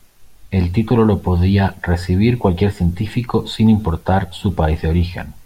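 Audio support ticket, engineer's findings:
Listened to the full speech recording: nothing stood out, no symptom found to attribute to any component.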